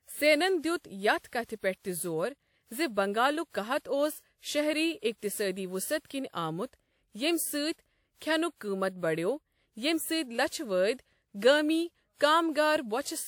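From start to finish the speech has a swirly, hollow, smeared quality with softened attacks, even though content reaches up to about 20.1 kHz. That's generation loss, likely from roughly four lossy passes, which fits WMA 1 at 96 kbit/s, each requantising on a shifted frame grid.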